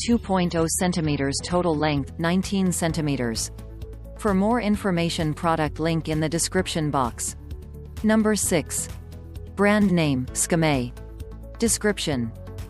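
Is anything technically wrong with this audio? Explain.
Yes. From 0 to 2.0 s the sound is dull and smeared with strong codec artefacts, then clears suddenly without a gap: an adaptive stream starting at a low bitrate. The player began on a version consistent with 32 kbit/s MP3, then switched to one fitting 128 kbit/s once it had judged the connection. Even then, nothing reaches above 14.9 kHz.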